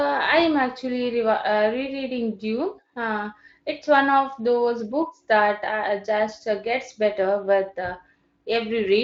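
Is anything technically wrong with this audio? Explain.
No, no technical faults here.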